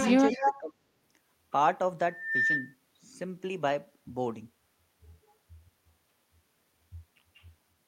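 From 0.00 to 0.59 s a delayed copy of the speech trails it by about 189 ms, only slightly quieter. This is likely an echo leak through a far-end canceller. Between 0.37 and 0.84 s the speech dips, deepest by around 30 dB and for roughly 0.4 s in total. The likely cause is speech suppressed in double talk, as the canceller attenuated both its own talker and the loudspeaker echo. From 2.09 to 2.75 s a 1.8 kHz tone swells over about 0.3 s to a level somewhat above the speech: loudspeaker feedback squeal, as the microphone-speaker loop exceeded unity gain.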